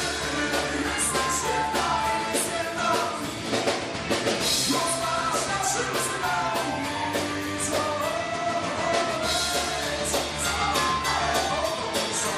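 Nothing stood out on listening; the audio holds together without any audible problem.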